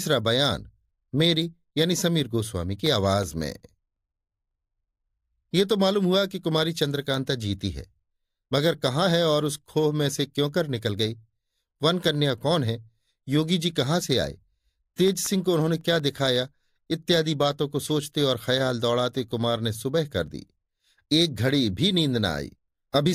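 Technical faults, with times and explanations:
2.86–4.69 s, CD scratch ticks: about six regular ticks a second, each only a few milliseconds long, as a scratch defeats error correction once per disc turn. The waveform shows evenly spaced spikes or brief flat gaps, and the spectrogram shows thin full-band vertical lines.
15.08–16.36 s, CD scratch ticks: the same once-per-revolution ticking at roughly six a second. The muted or interpolated spots are briefer, at around 2 ms, appearing as evenly spaced vertical streaks across the speech.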